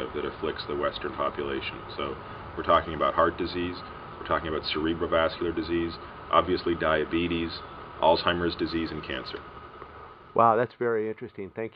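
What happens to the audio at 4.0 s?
Nothing goes wrong at 4.0 s; the audio plays through that moment intact, with no dropout, click or other fault.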